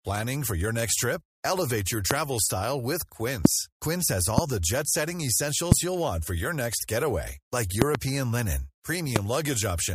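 Loud pops strike at 2.11–2.13, 3.45–3.48, 4.38–4.41, 5.72–5.74 and 9.16–9.18 s, with a double pop between 7.82 and 7.97 s. Each is a sharp thump far louder than the speech, likely from a voltage spike. Unlike a dropout, the speech carries on unbroken underneath.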